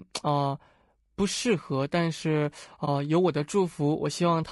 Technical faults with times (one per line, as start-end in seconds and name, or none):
0.00-4.51 low-delay AAC compression
2.85-2.88 AAC frame loss with muting